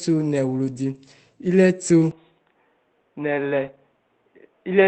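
Speech heard through an Opus call path turns briefly rough and grainy from 0.65 to 0.71 s and again from 3.63 to 3.69 s, each stretch about 40 ms long. These are lost packets rebuilt from error correction: low-bitrate copies carried in the following packets, which fits two 20 ms packets lost each time, filled the holes, so nothing drops out but the sound is coarser. Just after, at 0.73 to 0.77 s, a roughly 20 ms smear replaces the real signal. That is a short concealed packet loss, where the decoder extended the preceding sound and blended back into the arriving audio. From 2.11 s to the end, the sound abruptly goes duller and boxier with no gap. Nothing remains above 3.8 kHz, the level falls by about 5 dB, and a faint new background hiss sits well below the signal, likely because the input switched to a poorer device.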